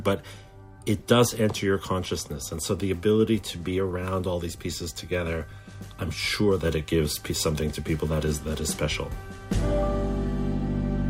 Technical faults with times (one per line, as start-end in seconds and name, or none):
0.99-1.03 corrupt frame decoded